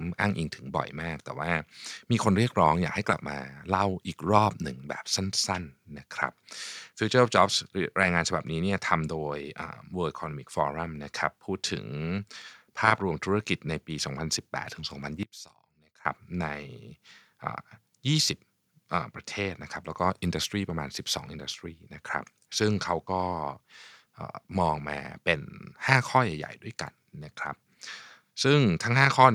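From 15.23 s to 16.05 s the speech collapses to a faint, distant residue, dropping by about 21 dB, then returns at full level. The likely cause is one channel inverted: one side of the stereo pair had its polarity flipped, so when the two channels are summed to mono, the centred voice they share cancels itself out. Only the small difference between the channels survives for those 0.8 seconds.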